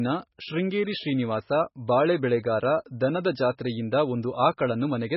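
From start to finish the speech sounds dull and heavily mangled, with nothing above 5.5 kHz. That's likely MP3 compression at a very low rate, roughly what you'd expect from a 16 kbps encode. Starved of bits, the encoder chops the treble at a fixed point and drops the weaker frequency lines, which flicker in and out frame to frame. So the speech comes across watery and swirly, with s sounds losing their bite.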